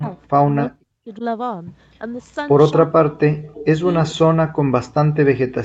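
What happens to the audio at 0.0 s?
Speech suppressed in double talk, from 0.0 to 0.07 s: the speech dips by roughly 20 dB, likely because an echo canceller mistook overlapping talk for echo and turned it down.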